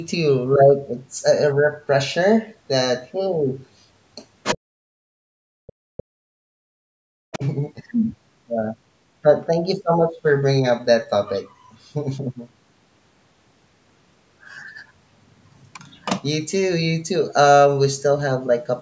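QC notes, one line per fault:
4.43 to 4.58 s and 7.33 to 7.48 s, other side's voice leaking through: the echo canceller likely missed loudspeaker pickup, so short scraps of a second voice appear, the first nearly as loud as the talker, the second well below.
4.61 to 7.43 s, speech suppressed in double talk: with both sides active, the canceller likely could not separate them and pulled the talker down by as much as about 40 dB, leaving the voice dipped and broken.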